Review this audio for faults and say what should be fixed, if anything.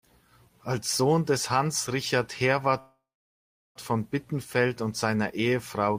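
A call audio freeze runs from 2.79 to 3.78 s. The last sound is stretched into a fading fill, then about 0.71 s of silence. Speech resumes where it stopped, nothing lost, just delayed by about 0.96 s. Held-up packets likely drained the jitter buffer. A larger adaptive jitter buffer would prevent this.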